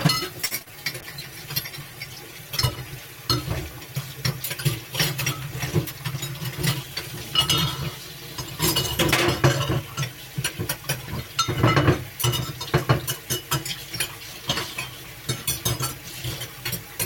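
Right at the start, from 0.45 to 0.53 s, there's a short stall from a late packet. A packet showed up behind schedule, the jitter buffer ran dry, and the receiver held the last bit of sound for about 56 ms until the packet landed. It then carried on from the same spot, so nothing is lost. The sound just hangs a beat too long with a faint buzzy dip, and everything after it sits 56 ms later.

Right behind that come two short concealed packet losses, overlapping. One runs from 0.59 to 0.77 s and covers a 20 ms gap. The other, inside it, runs from 0.62 to 0.68 s and covers a 40 ms gap with 38 ms of made-up audio. In both, the decoder never got that audio, so the receiver extended what it had, pitched or noisy as needed, and blended back in. It comes across as a quick smear or wobble, and any short transient in there can simply vanish.

From 1.02 to 3.12 s there's a call bitrate drop. The bandwidth estimate fell and the encoder went from 96 kbps down to 21 kbps, staying at the bottom for about 2 s. 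At that rate Opus codes coarsely and trims off the top end, so the sound turns muffled and a bit watery and rough until the rate climbs back.

Then, between 5.92 and 6.91 s, there's a jitter buffer speed-up. The buffer had more audio than it wanted, so the receiver kept snipping out tiny pitch-period chunks, around 70 ms in total, to pull the delay back down. Playback runs at about 106% speed with the pitch unchanged, so that stretch feels slightly rushed.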